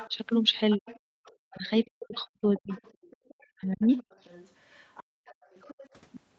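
From 0.00 to 0.09 s, the other side's voice leaks through at about 15 dB below the talker. A longer, fainter leak follows from 0.71 to 5.89 s, at about 25 dB down. It is likely residual loudspeaker echo the canceller missed.

Speech is suppressed in double talk at 0.06 to 0.12 s, a dip of about 10 dB. Deeper cuts of about 40 dB follow at 0.76 to 0.88 s, 1.50 to 2.72 s, 3.32 to 3.89 s and 5.13 to 5.30 s. The talker's voice drops out in pieces, likely because the canceller treated overlapping speech as echo.

From 1.16 to 1.22 s, the background is gated by the echo canceller. The room sound falls by about 40 dB for roughly 70 ms, then returns. The canceller clamped the microphone hard while the loudspeaker played.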